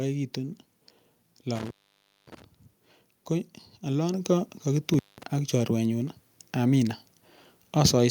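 Between 1.55 and 2.42 s an intermittent contact opens a loose cable or plug for about 0.57 s. The speech drops out with crackle at both edges and faint hiss underneath, which sets it apart from a clean digital dropout, where the gap would be silent and edgeless.

At 4.14 s the microphone volume is stepped up by about 5 dB. The software raised the input level in a single jump, so speech and background noise rise together at once, rather than easing up gradually as a compressor or gain ramp would.

The intermittent contact returns from 4.94 to 5.23 s, this time open for about 0.19 s. It has the same crackle-edged cut with hiss in the gap, and is shorter than the first.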